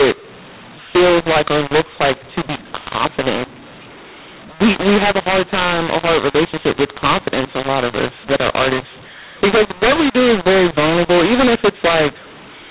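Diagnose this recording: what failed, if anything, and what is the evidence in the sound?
A mu-law and A-law mix-up at the codec stage runs through the whole recording: A-law bytes are being decoded as mu-law, so levels are scrambled, speech turns harsh, and pauses fill with noise. Ordinary G.711 quantisation noise stays faint and tracks level.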